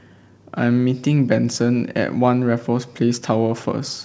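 A speech clip with clock drift between sender and receiver. The sender's clock runs slow, by roughly one and a half percent. The receiver's jitter buffer keeps draining, so it has to stretch what it gets to keep playing. This shows up as repeated timing corrections from 0.31 s to 3.82 s. The receiver fills the gaps by repeating short pieces. Playback runs at about 98% speed, adding roughly 70 ms over the stretch. The edits are small and unevenly spaced. They are heard, if at all, as faint hiccups or a slightly dragging, unsteady tempo. The sound comes through a G.722 call path, so nothing is heard above 8 kHz.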